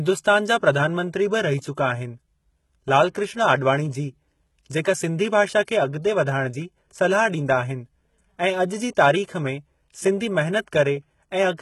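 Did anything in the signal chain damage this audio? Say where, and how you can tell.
Yes. The speech sounds gritty and lispy on sibilants, with nothing above 11.8 kHz. This is likely HE-AAC compression at the codec stage, heavily damaged and consistent with about 16 kbps.

Right after "ऐं अॼु जी", a short hiss runs from 8.95 to 8.97 s ahead of an attack. This pre-echo comes from codec noise spreading across the block before the transient.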